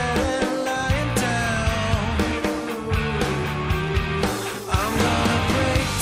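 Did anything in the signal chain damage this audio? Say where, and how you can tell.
No, no stage in the chain has left an audible mark on this audio, so there is nothing to trace.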